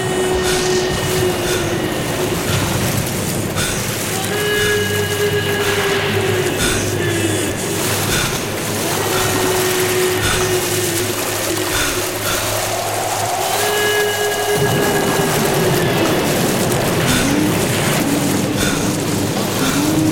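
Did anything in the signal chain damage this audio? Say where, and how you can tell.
Yes. Chunks out of order at 6.5–7.5 s, 11.0–12.0 s and 17.0–18.0 s, a buffering or packet-delivery fault. In each span a 500 ms block of audio plays one chunk late, after the block that should follow it, so the two halves of that second swap places. Nothing is missing, but the sound jumps backward and forward, and the three hard joins fall at the start, the midpoint and the end of each span.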